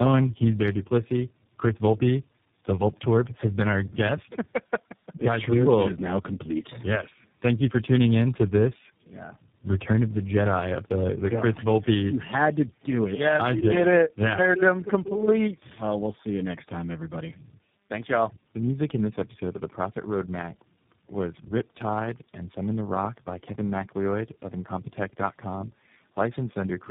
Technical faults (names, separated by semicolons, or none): tandem speech coding